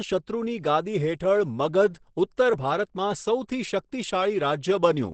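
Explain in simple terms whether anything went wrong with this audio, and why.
Yes, from start to finish the speech sounds muffled and hoarse, with nothing above 8.8 kHz. This is likely heavy Opus compression in its speech mode. Unlike MP3 damage, there is less swirling or watery warble.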